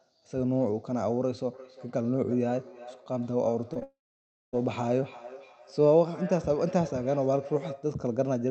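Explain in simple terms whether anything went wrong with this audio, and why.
Feedback echo between two devices runs from 1.53 s to 8.04 s. The sound returns about every four tenths of a second, fainter than the original and thinner each time. This happens when two devices in the same room join one call. One device plays the other's sound, and the second device's microphone picks it up again. Each device's echo cancelling only removes what its own speaker plays, so it misses this echo.

Short concealed packet loss occurs twice, from 3.73 s to 3.77 s and from 3.79 s to 3.83 s. Each gap is only a few hundredths of a second, so it passes as a quick smear or wobble. A small piece of the call arrived too late to be played. The receiving device filled each hole by stretching the sound just before it, then blended back into the real audio.

A long network dropout follows from 3.83 s to 4.55 s. 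The sound briefly continues as a fading buzz or hiss, then goes silent for over half a second. When the audio resumes at 4.55 s, whatever was said during the gap is missing. The likely cause is that nothing reached the device for about seven tenths of a second, and it could only hold the last sound for a moment before giving up.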